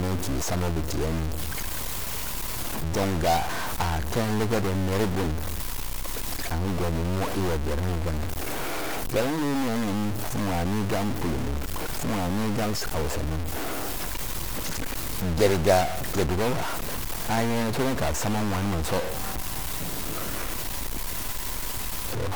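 Speech with a stuck bit throughout: distortion, and pauses filled with noise, likely from a broken data line. The waveform shows offset steps, and the spectrogram shows broadband hash even in pauses.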